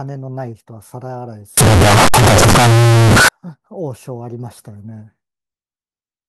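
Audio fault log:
1.57 to 3.28 s, signed and unsigned mixed up: The speech becomes very loud, harsh distortion. Quiet stretches blare as loudly as the rest. The likely cause is samples read with the wrong sign convention, which fits 16-bit audio. The flipped top bit turns each zero crossing into a full-range jump.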